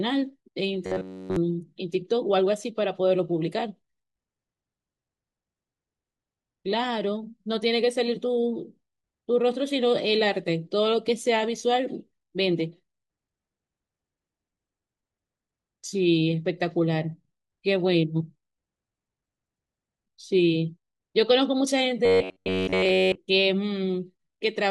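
From 0.86 to 1.36 s, the speech turns into a rigid, metallic buzz. The same thing happens again from 22.05 to 23.16 s. This is robotic sound from repeated short buffers. The buzz sits at 93.8 Hz, which points to a slice of roughly 11 ms being replayed over and over. The likely cause is new audio arriving too late to fill the gaps. All the sound in each stretch is repeats, so the real audio is skipped.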